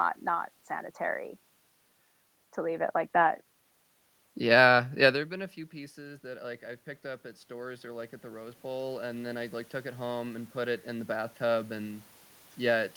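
From 5.96 to 12.08 s, automatic gain rising: after the input dropped by about 15 dB near 5 s, the gain climbs about 11 dB, lifting room noise alongside voice, unlike a talker simply moving.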